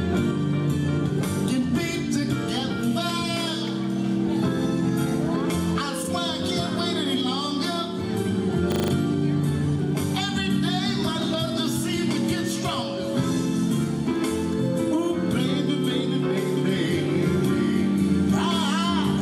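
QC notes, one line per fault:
6.02–6.08 s and 11.45–11.50 s, frames out of order: in each spot two neighbouring blocks of about 23.2 ms, one frame apiece, play swapped. You hear a brief garbled flutter. Unlike a dropout, no time goes missing.
8.72–8.92 s, system hang loop: a single 40 ms piece of audio repeats exactly five times, producing a steady buzz at 25 Hz while the hardware keeps cycling its buffer during a freeze. The repeats are identical copies, not a varied stutter, and the timeline afterward continues without a gap.
16.57 s to end, doubled audio track: a full-band second copy runs around a second behind and about 5 dB quieter, most likely from a second, slower capture path. Unlike an echo or reverb, it has no decay and no room colour, and it cuts in abruptly.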